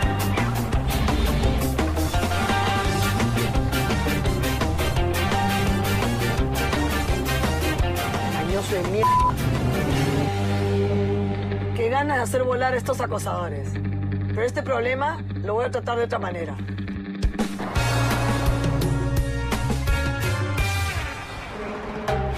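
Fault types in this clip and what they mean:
Dropped samples: You get two isolated sharp clicks, one at about 9.62 s and another at about 17.63 s, each showing as a thin vertical line right across the spectrum. The likely cause is a tiny chunk of the stream going missing, a fraction of a millisecond's worth, so the waveform jumps straight from one value to a later one. Nothing audible is actually lost; the jump itself is what makes the click.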